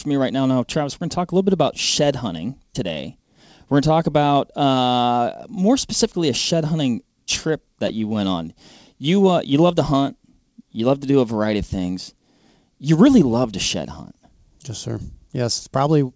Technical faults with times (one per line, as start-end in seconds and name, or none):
7.88-7.91 short concealed packet loss